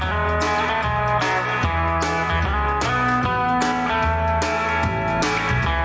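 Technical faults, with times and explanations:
Throughout, gain pumping. The gain swings by roughly 5 dB. Loud and soft parts sit close together, so the sound feels squashed. Likely cause: input gain far too high, with a fast limiter clamping down.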